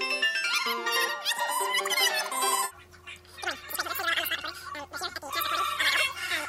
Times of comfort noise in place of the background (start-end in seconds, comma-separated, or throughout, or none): none